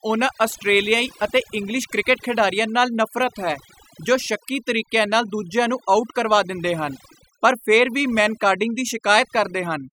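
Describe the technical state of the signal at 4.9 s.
At 4.9 s the speech is under overdone noise removal, which runs through the whole clip rather than starting or stopping there. A noise reducer set too aggressively is pulling individual frequency bands down to almost nothing whenever they sit near its noise estimate. Quieter parts of the speech go with them. Between phrases the background drops and breaks up into twinkling specks. On a spectrogram this shows as isolated bright dots on a dark floor, with ragged gaps in the speech harmonics.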